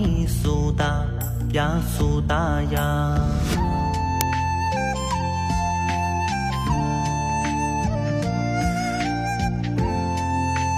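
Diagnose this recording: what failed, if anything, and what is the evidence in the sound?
Uninitialised buffer at the driver or buffer stage: a loud crack at 4.21 s, lasting about 2.7 ms, which fits a 128-sample buffer played out before any audio was written to it. Unlike a simple click or dropout, it is a loud crack of leftover memory values rather than a single step or a silence.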